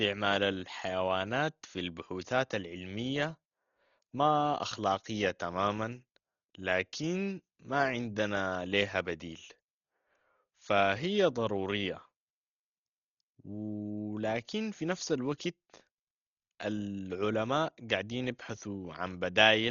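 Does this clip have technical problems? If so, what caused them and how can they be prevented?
Yes. Throughout the speech nothing remains above 6.9 kHz and unquantised bands are filled with rough, fluttering noise, heavy damage likely from low-bitrate Dolby Digital compression, pointing to about 32 kbps. Encode at a higher bitrate to prevent it.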